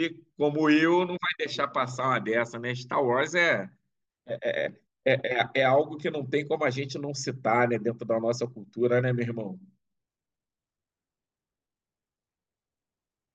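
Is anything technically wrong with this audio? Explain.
No, nothing in this speech recording points to a technical fault. There is nothing to flag or correct.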